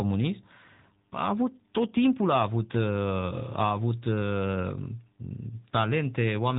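From start to finish the speech has passed through an AMR narrowband mobile codec, the AMR-NB coder used on 2G and 3G phone links. It rebuilds the voice from a vocal-tract model fed by sparse pulses, and its 8 kHz sampling removes everything above about 3.8 kHz. The speech therefore sounds boxed-in and telephone-thin, with the plainly audible buzzy, synthetic edge of a mid-rate mode, which fits a bitrate of about 10 kbps.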